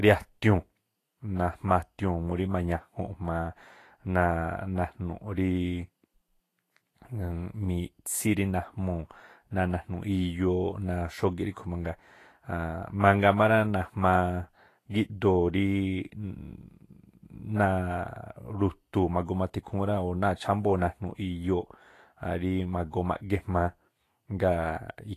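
Throughout the speech, the treble sounds hissy and grainy, tones have a roughened edge, onsets are blurred, and nothing is present above 14.2 kHz. This is likely Vorbis compression, its coarsely quantised high band turning detail into noise, consistent with a low bitrate around 33 kbps.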